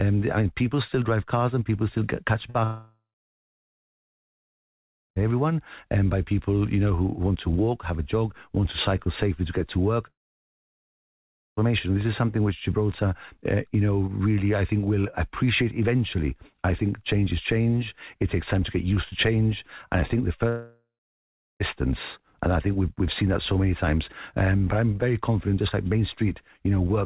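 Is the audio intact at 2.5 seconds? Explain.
No. Just after "people still get catch", from 2.50 to 2.56 s, there is a brief smear where short concealed packet loss left about 40 ms unreceived and the receiver filled the gap by extending the preceding sound.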